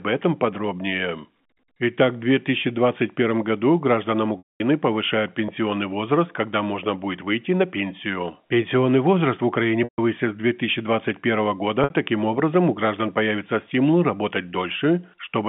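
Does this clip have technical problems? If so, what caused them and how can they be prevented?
Yes. Packet loss with pitch repetition occurs at 4.38–4.60 s (220 ms), 9.84–9.98 s (140 ms) and 11.84–11.90 s (60 ms). The receiver loops the last pitch period to cover the missing packets. The 60 ms gap sounds like a held buzz, and the longer two fade to silence before the speech cross-fades back. A spectrogram shows harmonics frozen as flat lines that then fade. The waveform shows identical cycles decaying. Forward error correction and a less congested network path prevent it.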